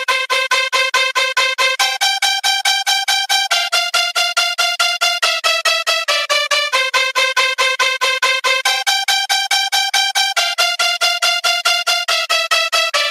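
Gain pumping runs throughout, with the gain swinging by around 10 dB, likely from excessive input gain driving a fast limiter.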